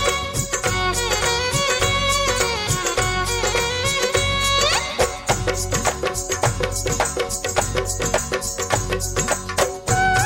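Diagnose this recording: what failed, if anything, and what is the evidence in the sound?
A block size mismatch (truncated) at the driver or buffer stage is discarding the tail of each block throughout. A steady buzz at 43.1 Hz points to writes of about 1024 samples, while pitch and running speed stay at 1.0 times normal.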